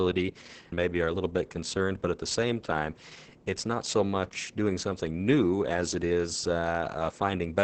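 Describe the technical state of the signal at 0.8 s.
At 0.8 s you're hearing Opus voice compression, present across the whole clip: SILK at about 10 kbps, band capped near 8 kHz, so speech sounds muffled, hoarse and slightly robotic.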